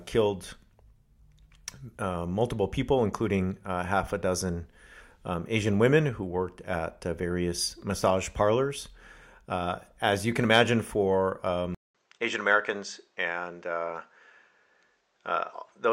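Input switched to a poorer device at 11.75 s, just after "you can imagine for": a 200 ms gap, then the speech loses everything above 8.2 kHz and sounds duller, with a faint new noise floor at an unchanged level, likely from a switch to another microphone.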